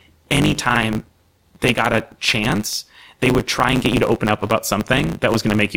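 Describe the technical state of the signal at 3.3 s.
At 3.3 s the speech carries a block size mismatch (truncated), present throughout the clip: each written block, consistent with 512 samples, loses its tail, leaving a 100 Hz buzz and speech running 1.16 times fast. Unlike a resampling error, the pitch stays roughly normal.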